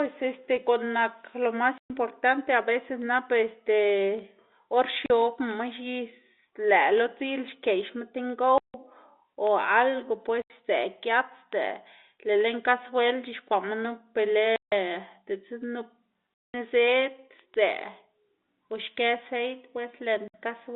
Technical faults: word clock ticks; packet loss filled with silence

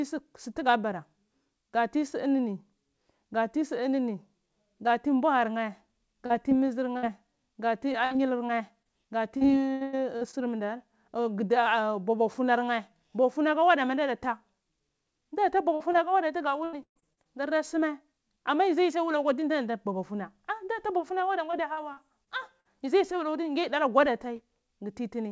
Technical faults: short concealed packet loss; burst of packet loss; repeated packet loss (robotic sound)

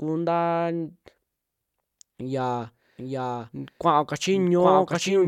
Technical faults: doubled audio track

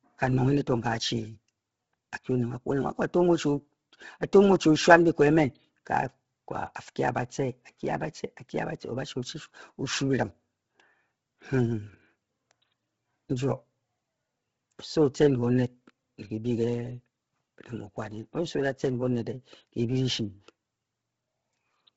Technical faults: Bluetooth LC3 compression

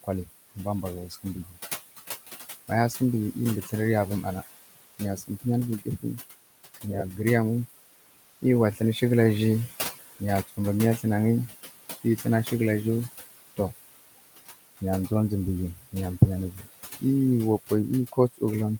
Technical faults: noise suppressor artifacts; speech cut by the noise suppressor

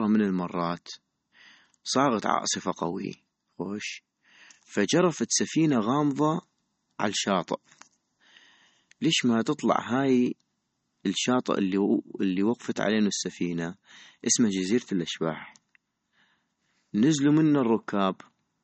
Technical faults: MP3 compression

